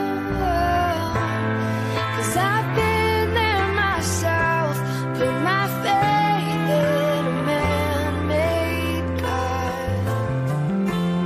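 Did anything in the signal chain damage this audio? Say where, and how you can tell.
No, no signal-chain damage heard.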